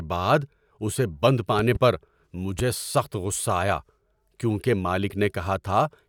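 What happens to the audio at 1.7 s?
A loud pop runs from 1.59 to 1.78 s, just after "بعد اسے بند". Two sharp pops in quick succession stand roughly 10 dB above the speech, which carries on underneath them. The sound points to a sudden electrical step or pulse entering the signal path, likely from a plug being moved, a switch, static discharge or a driver glitch, with the following circuitry shaping each pulse into a brief thump.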